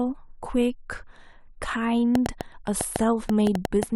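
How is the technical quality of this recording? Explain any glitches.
The recording is marred by a train of clicks in its second half. From 2.15 s to 3.84 s, sharp ticks pop over the speech at an uneven pace of about 5.4 per second, roughly ten in all, each standing out well above the level of the speech and plainly audible in the gaps too. The clicks share much the same shape, which points to something repeatedly injecting a short pulse, likely electrical interference from nearby equipment or a faulty connection or power supply.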